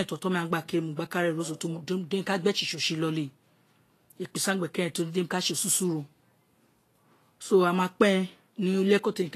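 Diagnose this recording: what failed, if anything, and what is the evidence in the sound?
The codec stage failed, likely through Vorbis compression at low quality: throughout the speech nothing survives above 14.2 kHz, and the remaining treble is hissy and grainy, coarsely quantised detail turned to noise. A plain low-pass filter would sound dull and clean instead. The damage fits roughly 35 kbps.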